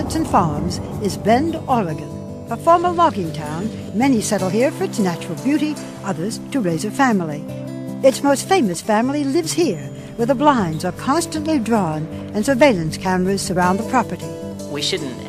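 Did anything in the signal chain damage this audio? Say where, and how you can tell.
No signal-chain damage is audible.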